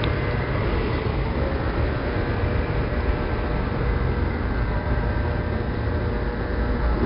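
Everyday sounds carry 4-bit ADPCM compression throughout, heard as a heavy, gritty hiss that rises with each loud event and smears sharp attacks. Unlike the warbling of perceptual codecs, this noise is broadband. Nothing above 5.3 kHz fits a sample rate near 11 kHz.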